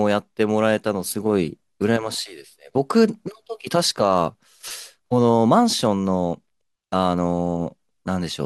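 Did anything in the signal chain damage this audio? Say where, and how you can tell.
No, nothing in this recording stood out on listening as damage from any stage of the signal chain.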